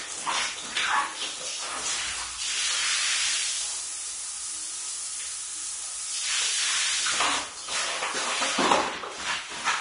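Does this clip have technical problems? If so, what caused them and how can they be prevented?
Yes. Throughout, heavy Vorbis compression likely quantised the treble too coarsely, leaving nothing above 10.6 kHz and grainy hiss in place of fine detail, which fits a bitrate near 32 kbps. To prevent it, encode at a higher Vorbis quality setting or bitrate.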